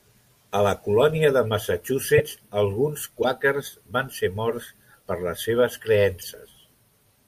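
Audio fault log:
2.16–2.20 s, corrupt frame decoded: a loud glitch peaking around -5 dBFS over a couple of damaged frames, whose misread codes put energy at the wrong frequencies.
3.22–3.24 s, corrupt frame decoded: a shorter glitch, roughly 10 dB down, across a couple of frames.
6.21–6.24 s, corrupt frame decoded: a faint glitch from a single frame. Unlike a lost frame, which leaves a gap or a smeared repeat, these add new, misplaced energy to the sound.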